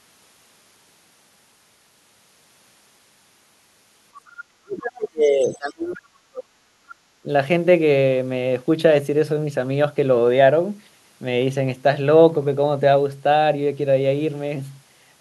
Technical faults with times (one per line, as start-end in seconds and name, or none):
4.26-4.43 other side's voice leaking through
4.63-6.51 speech suppressed in double talk
5.54-5.73 other side's voice leaking through
6.79-6.83 background gated by the echo canceller
7.23-7.28 speech suppressed in double talk